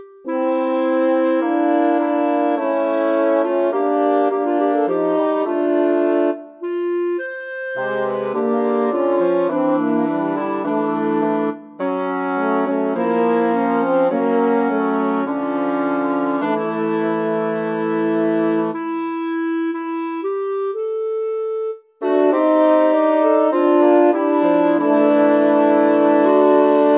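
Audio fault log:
No fault was found; the signal's continuity holds across the clip.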